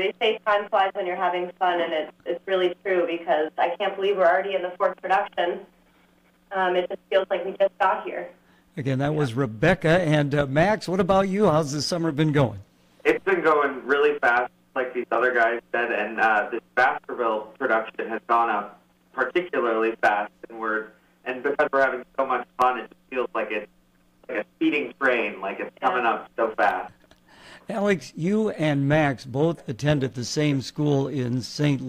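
No technical faults can be heard anywhere in this clip.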